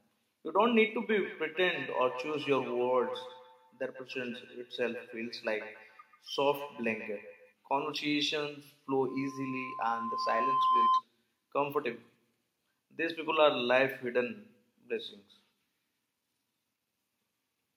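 From 1.09 s to 7.55 s the speech returns to itself in faint, thin, ringing repeats that follow each phrase at a steady interval of roughly 150 ms, the strongest about 15 dB below the direct voice. This is feedback echo between two devices: a second device in the same room plays back what the first one sent, its microphone hears it again, and neither echo canceller removes sound that a different device played.

From 9.07 s to 11.03 s a pure tone at 1 kHz appears and swells over about a second and a half until it sits a few decibels above the speech. This is loudspeaker feedback squeal. A microphone is picking up the loudspeaker it feeds, and at 1 kHz the gain around that loop exceeds one, so the tone keeps feeding itself and grows louder until it ends at 11.03 s.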